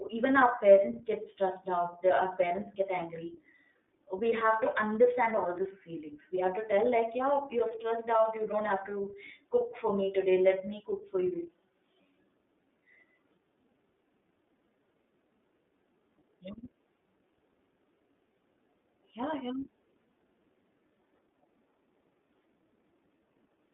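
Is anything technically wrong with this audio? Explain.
Yes. Throughout the speech, the iLBC codec's narrowband coding is plainly audible. Each 30 ms frame's excitation is coded independently, leaving a slightly rough, synthetic texture that fits the 13.33 kbps mode. A spectrogram shows energy confined to roughly 250 Hz–3.6 kHz, with a hard ceiling.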